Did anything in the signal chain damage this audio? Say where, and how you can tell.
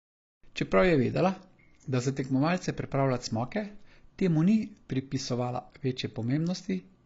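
Yes, the speech carries AAC compression damage throughout, most likely from a low-bitrate AAC-LC encode around 24 kbps. Nothing survives above 7.6 kHz, so a spectrogram shows a flat ceiling, and sibilants sound dull, smeared and fizzy.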